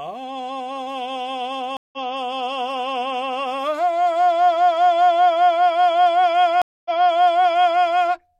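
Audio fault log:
1.77–2.02 s, stream reconnect: the music drops out for about 158 ms, then a fresh decoder resumes 93 ms earlier, repeating material rather than skipping it, which marks this off from a plain dropout.
6.62–7.83 s, stream reconnect: a 235 ms silence, then playback restarts almost a second earlier (975 ms) as the server resends a burst, so the passage audibly repeats.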